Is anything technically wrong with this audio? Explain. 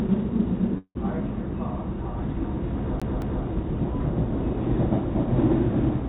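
Yes. There are two faults.

From 0.78 to 0.97 s there is a call audio freeze, likely caused by delayed packets draining the jitter buffer. The receiver extends the last sound for about 170 ms as a fading buzz, ending in roughly 70 ms of silence. The audio then resumes where it stopped, so nothing is lost, but everything after is pushed 170 ms later. On a waveform this shows as a decaying smear tapering to a flat line. On a spectrogram it is a smeared, blurred band that fades out.

From 3.00 to 3.44 s the clip has a CD stuck on one turn. The same 0.22 s segment plays twice in a row, each time starting with a brief mute at the jump, which gives a quick, mechanical stutter. On a waveform you can see an identical block of shape repeated, with a tiny gap at each seam. On a spectrogram the same pattern is copied side by side, with a thin vertical break at each jump. The spectrogram also shows the call path's band limit: nothing appears above 4 kHz.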